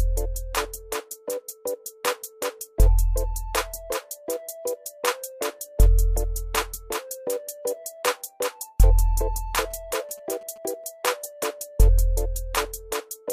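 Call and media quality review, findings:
GSM signalling bursts, 9.71–10.58 s: galloping ticks and short 217 Hz buzzes, roughly 30 dB down. Signalling RF from a nearby 2G phone is rectified by the audio circuitry.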